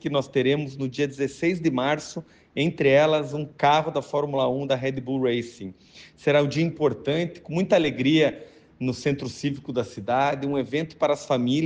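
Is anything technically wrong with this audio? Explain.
No, nothing in this audio points to a technical problem. The sound holds together throughout, with no break, glitch or distortion that stands out to the ear.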